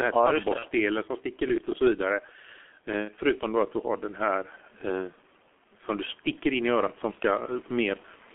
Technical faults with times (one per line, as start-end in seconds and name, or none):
0.00-8.35 gain pumping
0.00-8.35 G.723.1 codec
0.59-0.68 VoIP packet loss concealed by the speech codec
3.05-3.11 VoIP packet loss concealed by the speech codec